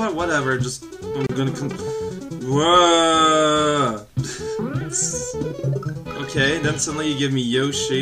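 At 1.27 s a gap at a join of encoded pieces opens: about 29 ms long, ending at 1.29 s, with the truly silent part shorter. Separately encoded segments were spliced without trimming encoder start delay and final-frame padding, leaving a dropout with smeared edges before the sound resumes.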